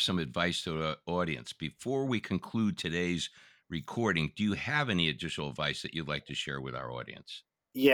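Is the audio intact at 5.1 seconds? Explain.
Yes, at 5.1 seconds the speech plays through cleanly, with no dropout, glitch or other fault heard at that moment.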